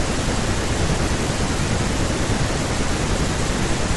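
Throughout the speech there is imaging from linear upsampling. The rate was doubled from 24 kHz to 48 kHz by straight-line interpolation, so the top of the band is dulled and a mirrored image sits between 12 and 24 kHz, roughly 25 dB down, giving sibilants a faint metallic shimmer.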